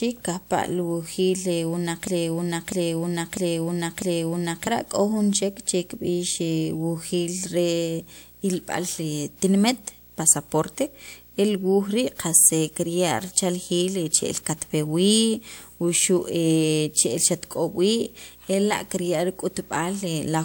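A video or display buzz runs under the speech from start to end, a 59.94 Hz field-rate hum with hash and a 15.7 kHz line tone, roughly 25 dB down, drawn as steady horizontal lines on a spectrogram. From 2.07 to 4.67 s a broken-record loop repeats a 649 ms fragment four times, likely a stalled stream, showing as identical waveform blocks.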